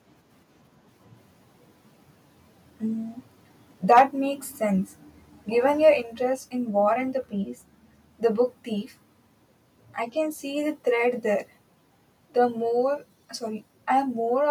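A short speech recording shows microphone overload from 3.91 to 4.02 s, just before "makes sense": the loudest syllable's peaks are flattened at the converter's ceiling, driven about 5 dB past full scale, with a small share of samples clipped. The harsh, crackling edge sits only on that peak rather than spreading across quieter passages, which separates it from codec distortion or a noisy cable. The likely cause is microphone input volume set too high. Three microphone volume steps down follow, at 4.0 s (about 2 dB), 6.0 s (about 3 dB) and 12.7 s (about 1 dB). Each is an instant level drop that affects voice and background equally and then holds steady. That is what tells it apart from a compressor or noise gate, which would ride the level up and down with the speech. The first step lands right after the clipped peak, so the likely cause is call software automatically turning the device's input volume down in response to the overload.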